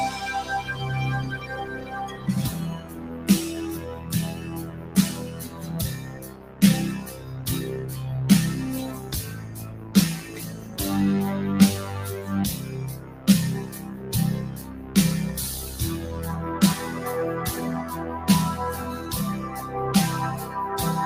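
A noise suppressor applied to music or sounds runs throughout, mistaking sustained material for noise, so the level pumps and thins with swings of around 10 dB. Sound cut by the noise suppressor is clearest at 2.8 to 2.97 s, 3.98 to 6.61 s, 8.97 to 9.94 s, 10.56 to 10.78 s, 12.57 to 13.27 s and 14.49 to 14.82 s, where held sound sinks by about 5 to 6 dB.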